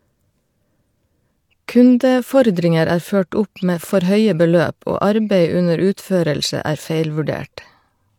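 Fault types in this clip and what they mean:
No technical faults are audible in this speech.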